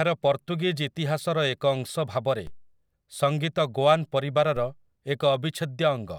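A DC step occurs at 2.47 s and again at 4.57 s. Each time, the waveform's zero line jumps by about -31 dBFS and then drifts back as a 2 Hz high-pass bleeds it away. Both are heard as a low thump beneath the speech.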